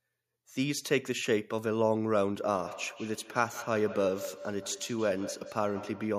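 Feedback echo between two devices from 2.42 s: a second device's playback leaks back into the microphone, so words return about 150 ms later, about 14 dB down.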